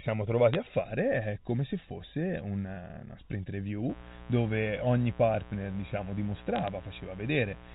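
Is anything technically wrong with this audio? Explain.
Yes, two faults stand out in this speech.

A sharp tick at 0.53 s, and a short burst of crackle from 6.56 to 6.68 s, sit on top of otherwise undisturbed speech. These are bit errors on a digital phone line. Over a 64 kbps G.711 mu-law link, a small fraction of a percent of bits got flipped, each one corrupting a single sample. When a sign or high-order bit flips, that sample jumps far from its true value, giving a click.

From 3.89 s to the end, a steady, raspy buzz sits about 20 dB below the speech. This is mains buzz at 60 Hz. Something like a dimmer, rectifier or poor shielding lets sharp switching spikes into the signal twice per mains cycle. That produces a dense stack of harmonics, up to the 4 kHz limit of the telephone band, rather than a smooth hum.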